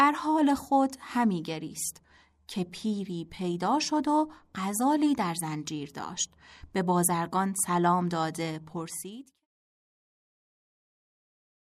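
There are no technical faults in this speech; the smooth fade-out from around 8.5 s to 9.5 s is a normal editorial ending.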